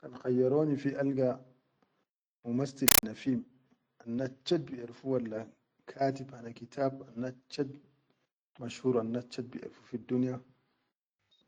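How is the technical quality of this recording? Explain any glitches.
The recording has one serious glitch: from 2.88 to 3.03 s the speech is replaced by a compressed stream played as audio. Encoded Dolby Digital data was treated as ordinary samples instead of being decoded, so each frame comes out as a 9.33 ms burst of noise followed by silent padding, repeating at 31.25 Hz, which fits an AC-3 stream. It sounds like a very loud, rasping static. Unlike a random noise burst or clipping, it has a steady mechanical rhythm set by the frame rate.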